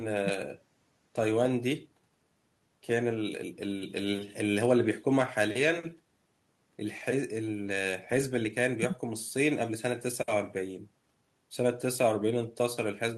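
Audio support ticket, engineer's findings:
No audio faults found in this speech recording.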